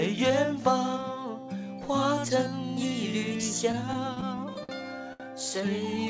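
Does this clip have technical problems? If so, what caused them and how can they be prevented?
Yes. Between 3.72 and 4.72 s there are repeated stalls, a stutter. The sound drags and catches seven times. Packets kept arriving late, so the jitter buffer ran dry again and again. Each time, the receiver held the last sound to cover the wait. About 128 ms is filled this way, roughly 13 percent of that second. The longest hold is 53 ms. Nothing is lost, but the timing breaks up. A steadier network link and a jitter buffer that grows sooner under late arrivals would prevent it.

At 5.13 s there is a short stall from a late packet. One sound is held too long, about 69 ms, with a slight buzz or dip. A single packet arrived late, after a sudden 69 ms jump in delay. The buffer emptied, and the receiver stretched the last sound until the packet came, then carried on without loss. The wideband G.722 call path caps the sound at 8 kHz throughout, which is how that codec works. 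Reducing delay spikes on the network, for example by prioritising call traffic, would prevent it.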